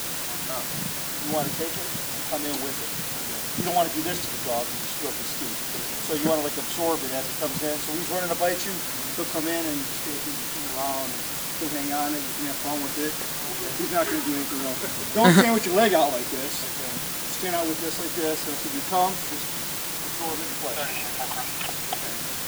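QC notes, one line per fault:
Throughout: low bit depth with dither. The audio is carried on only 5 bits, and dither noise is mixed in before each sample is rounded, so the coarse rounding error becomes a steady, even hiss rather than grainy distortion. The hiss sits at roughly the same level as the sound itself. On a spectrogram it shows as a flat, uniform wash across all frequencies; the waveform looks thickened by a constant noise band, even in quiet stretches.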